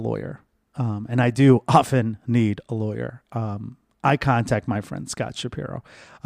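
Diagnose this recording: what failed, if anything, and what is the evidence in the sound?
Listening carefully to the speech, nothing stood out as a failure at any stage of the chain.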